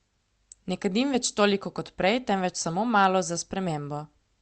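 Listening through this speech recording, which has passed through a WebRTC call path with Opus coding, nothing stood out as a technical problem.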